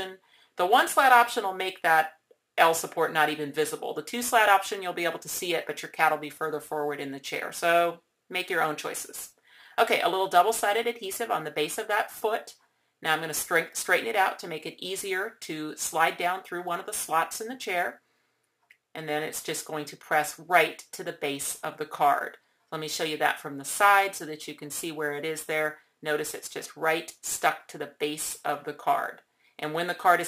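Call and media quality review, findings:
Crude rate conversion, throughout: gritty inharmonic fizz tracking loud and high content, error about 20 dB down; nearest-sample repetition, pattern fits an unfiltered 32 to 44.1 kHz conversion.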